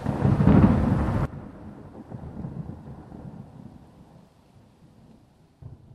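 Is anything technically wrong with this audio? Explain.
Yes, there's a sudden gain jump. At about 1.25 s the level drops by about 16 dB in one step and stays down right to the end. Both the sound and the background noise fall together, with no fade at all. That points to a digital gain change applied between one sample and the next, likely a setting or bit shift taking effect without any ramp to smooth the transition.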